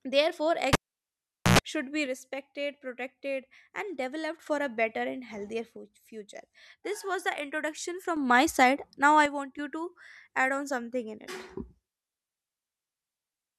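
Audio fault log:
0.73–1.59 s, cable pulled and plugged in: a pop, then near silence for about 0.81 s, then a roughly 0.1 s burst of 60 Hz mains buzz while only the plug tip touches the contact, then a second pop as the speech returns.
2.06–4.46 s, 5.77–8.17 s and 9.26–9.59 s, one channel drops out: the speech level falls abruptly by about 6 dB and jumps back at each end. The likely cause is loss of one stereo channel, which halves the shared signal in the mono sum.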